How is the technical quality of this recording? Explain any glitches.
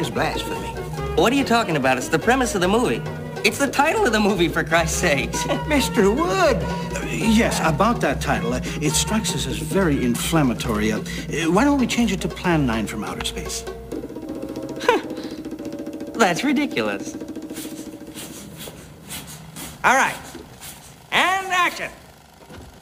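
No glitches or technical faults can be heard here.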